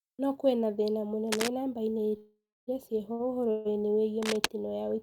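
From 1.25 to 1.50 s a worn cable or connector likely shifted, giving cable scratch noise: a burst of rough scratching just under the speech. At 2.09 to 2.13 s a late packet emptied the jitter buffer, a short stall that holds the sound about 19 ms too long. Packets were likely held up again from 2.17 to 2.69 s, a call audio freeze of about half a second: the last sound carries on as a fading buzz, then about 230 ms of silence before speech resumes where it stopped. Another late-packet stall at 3.13 to 3.21 s stretches the sound by about 60 ms. From 3.51 to 3.73 s a second freeze, likely from delayed packets, inserts about 140 ms of fading buzz with no silence. From 4.22 to 4.46 s cable scratch noise, likely another moved cable or connector, returns, roughly as loud as the speech.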